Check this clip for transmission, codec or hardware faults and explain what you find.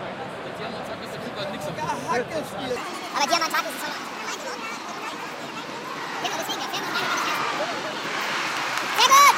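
One fault stands out: a section at the wrong speed, running from 2.76 s to the end of the clip. The likely cause is a player or edit that clocks this stretch against the wrong rate, so it is read out 1.67 times faster than it was recorded. Speed and pitch move together here, so from 2.76 s onward the sounds jump abruptly higher, by roughly ten semitones, and play noticeably hurried.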